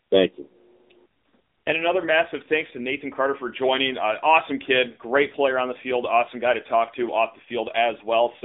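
From start to finish the speech carries the AMR narrowband mobile codec sound, AMR-NB at 7.95 kbps. Nothing gets through above 3.8 kHz, and the line band runs from roughly 250 Hz to 3.7 kHz. At this low rate the pulse-driven vocal-tract model is plainly audible, so the voice comes out buzzy, boxy and a bit synthetic.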